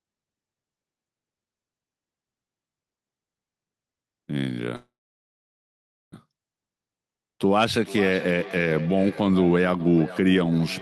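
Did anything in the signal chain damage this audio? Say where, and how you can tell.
Yes. There are two faults, both on the call side.

The first is a call audio freeze, and the likely cause is the network stage. At 4.75 s the sound stops advancing. A short fill tails off, then about 1.22 s of silence follows. The audio resumes at 6.14 s exactly where it left off. Nothing is lost, but everything after runs about 1.37 s late. Packets were held in transit, and the jitter buffer drained and padded the wait.

The second is feedback echo between two devices, a call-processing fault. From 7.84 s to the end, each phrase returns about every 0.4 s. The repeats peak at about 16 dB below the direct speech, and they sound thinner and more ringing each pass. A second device in the room replays the far microphone, and that microphone hears it again. Each echo canceller only removes its own playback, so the loop survives.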